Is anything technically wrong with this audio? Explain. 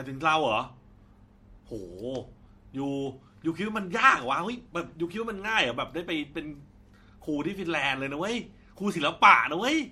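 Yes, there's generation loss throughout the speech: it sounds swirly, hollow and smeared, with blurred attacks, more than one encode would give. That's likely from repeated MP3 passes, about four, around 62 kbit/s, each requantising on a shifted frame grid so the damage stacks.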